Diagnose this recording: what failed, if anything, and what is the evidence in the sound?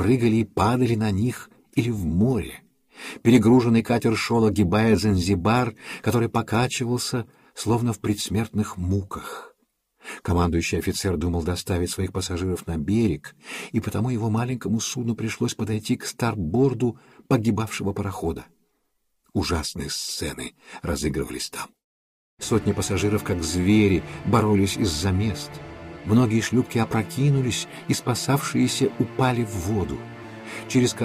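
Nothing in the signal chain points to a failure at any stage, from wiring and conversion through to playback.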